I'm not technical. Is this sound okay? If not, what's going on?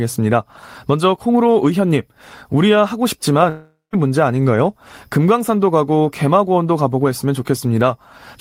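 No. At 3.49 s the speech likely stopped arriving over the network for almost half a second: a long network dropout. The player filled in with a fading buzz, then about 0.17 s of silence, and speech resumes at 3.95 s with that piece lost.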